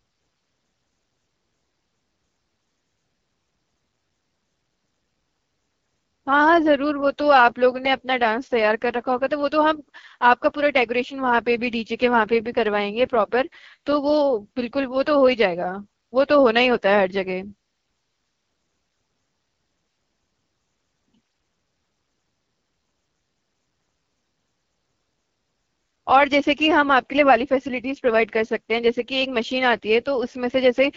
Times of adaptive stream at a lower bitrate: none

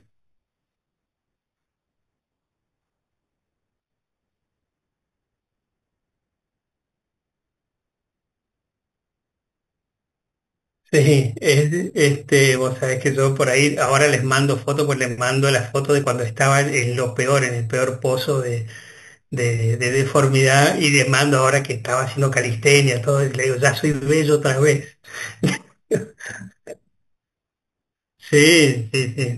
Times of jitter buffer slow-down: none

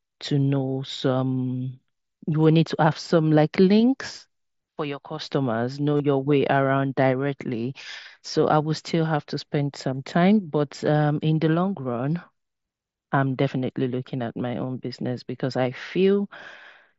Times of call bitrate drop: none

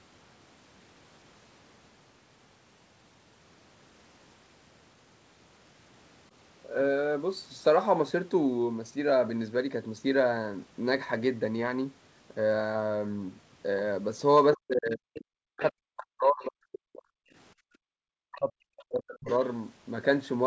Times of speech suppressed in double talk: 14.55-17.01, 17.74-19.28

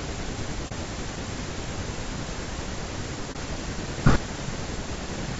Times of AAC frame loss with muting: 0.68-0.72, 3.32-3.36

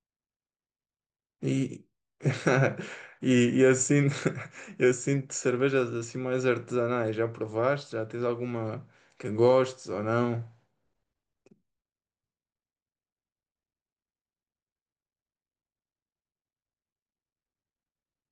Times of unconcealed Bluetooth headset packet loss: none

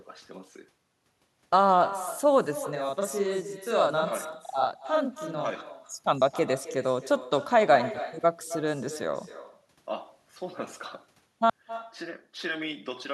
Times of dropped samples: none

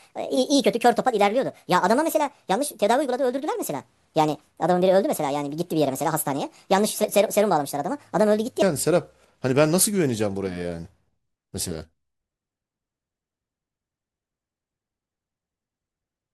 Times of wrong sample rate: 0.00-8.62

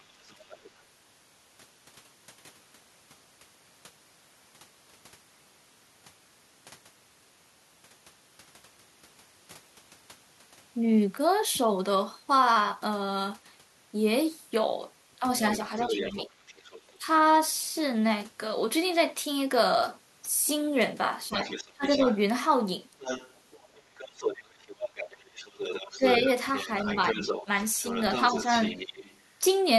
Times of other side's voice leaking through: 0.00-0.82, 15.48-16.95, 21.37-29.17

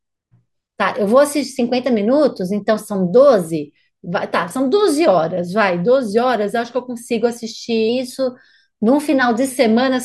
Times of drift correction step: 1.59-3.49, 7.89-9.49

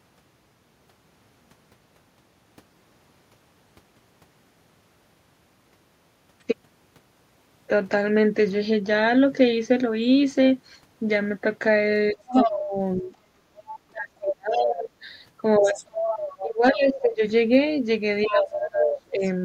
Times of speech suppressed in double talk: 12.13-17.22, 18.26-19.23

